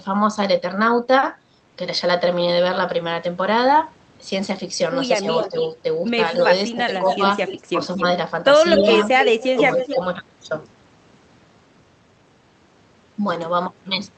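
Both ends seem to talk at once from 5.21 to 5.53 s. An echo canceller that likely cannot tell its own talker from the loudspeaker echo turns the speech down, by about 10 dB at worst, in brief dips totalling roughly 70 ms. The same speech suppressed in double talk returns from 6.71 to 7.2 s, with dips of about 15 dB across roughly 150 ms. Shallower dips of about 5 dB follow at 7.73 to 7.78 s and from 9.5 to 9.97 s.

Overlapping these, the far side's canceller likely fails to remove all of its loudspeaker pickup, so an echo leak sends a delayed copy of the voice back about 255 to 260 ms late. It appears from 5.29 to 5.64 s at about 10 dB below the speech, and from 6.86 to 8.02 s at about 15 dB below. From 8.76 to 9.95 s it is loudest, only about 5 dB under the direct voice. The Opus call path itself limits the audio to an 8 kHz band.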